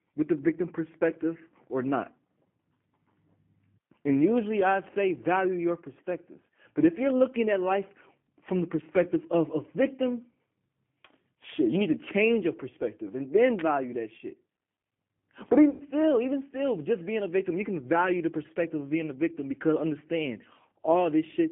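The whole recording carries G.729 codec damage, and it is plainly audible. The speech sits in a narrow line band of about 150 Hz to 3.4 kHz. The sound is rebuilt from a filter, a pitch predictor and a few pulses per frame. This points to an 8 kbit/s stream. The voice is clear enough but rough and synthetic.

From 13.59 to 13.61 s there is a sharp snap or tight cluster of clicks lasting about 20 ms. It falls between "your perspective and then" and "value that shit". It sits on top of the speech. It is likely an electrical switching spike from a nearby switch or motor.

At 15.70 s the speech is stretched out and fades until 15.82 s, just before "even still just being". This is VoIP packet loss concealed by the speech codec. About 100 ms of audio went missing, which fits five lost packets. The decoder repeated its last pitch and filter at falling gain.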